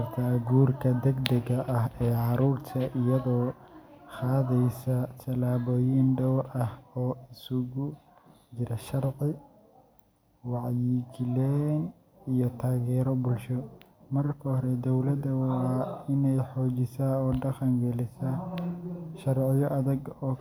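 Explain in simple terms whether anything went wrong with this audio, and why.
Nothing went wrong with this recording; there's no glitch or drop anywhere to point to.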